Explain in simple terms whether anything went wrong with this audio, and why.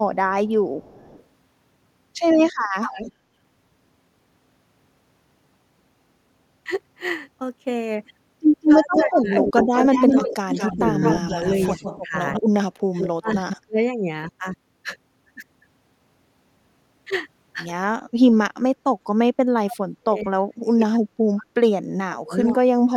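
Two things went wrong, and both point to a speakerphone call.

The first is an echo leak. A delayed copy of the speech comes back, heard at 0.46 to 1.24 s, 2.65 to 3.12 s, 8.62 to 12.4 s and 12.99 to 13.57 s. The repeat trails by about a third of a second at first, then about a fifth, then about a sixth. It starts faint. From 8.62 to 12.4 s it is as loud as the speech itself. The likely cause is a loudspeaker whose sound reached the microphone, and an echo canceller that failed to remove it.

The second is speech suppressed in double talk. The voice dips or drops out in pieces at 8.79 to 10.86 s, 11.25 to 13.31 s, 13.65 to 14.1 s, and from 19.64 s to the end. The dips are moderate in the first stretch and very deep after that. Together they remove about a second, a second and a half, under half a second, and three seconds of speech. The first two gaps overlap the echo. This likely happened because both sides spoke at once, and the echo canceller turned down the loudspeaker side's own talker along with the echo.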